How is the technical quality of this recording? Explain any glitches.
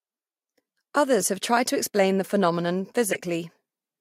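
The recording has two brief glitches: at 1.20 to 1.25 s and 3.12 to 3.16 s, the second louder, peaking around -10 dBFS against around -15 dBFS for the first. Both are corrupt frames that were decoded anyway. Damaged bits in a couple of compressed frames each time gave the decoder wrong gains or misread spectral codes, so energy landed at frequencies unrelated to the speech for the few tens of milliseconds those frames cover.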